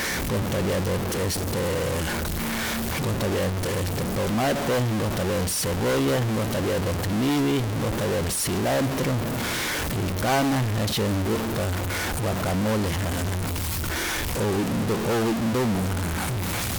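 Speech carries harsh, buzzy distortion throughout, the mark of a stuck bit, likely from a failed converter or data line. Its step, around -20 dBFS, shifts about half the samples: the waveform shows squared-off shelves, and a spectrogram shows pauses filled with broadband noise.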